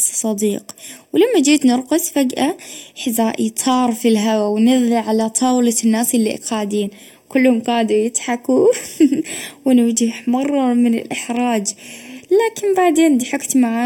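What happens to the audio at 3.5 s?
At 3.5 s the speech carries channel delay (comb filtering), present throughout: one channel lags by roughly 0.4 ms, so mono summing cuts notches from about 1.5 kHz upward, sounding hollow and phasey.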